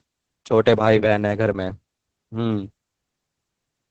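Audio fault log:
Throughout, Opus voice compression. The speech is cut off above 8 kHz and sounds muffled. The SILK linear-prediction coder codes its excitation coarsely, giving a hoarse, slightly robotic edge. Damage this heavy fits a bitrate near 10 kbps.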